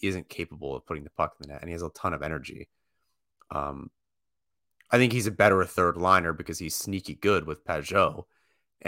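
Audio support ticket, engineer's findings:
Checked the speech recording end to end and nothing stood out, so there's no fault to log on this ticket.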